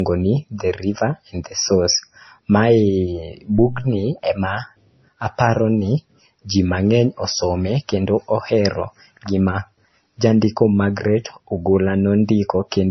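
Throughout the speech, nothing is heard above 6 kHz, and the sound carries two overlapping sets of compression artefacts heard together. This is most likely transcoding between lossy codecs. The lower layer fits a low-bitrate MP3 around 24 kbit/s, later re-encoded as WMA near 96 kbit/s. The higher second bitrate cannot restore what the first discarded, so the 6 kHz ceiling remains. The layered mix of artefact types is what distinguishes this from a single low-bitrate encode.

From 3.58 to 3.98 s, a deep phantom power thump occurs. It comes from a supply being switched on a live input, with the voltage step passing through the coupling capacitors. It is heard as a low, dull blow that dies away over about 90 ms. Unlike a handling bump or a plosive pop, it is a single low-frequency thump.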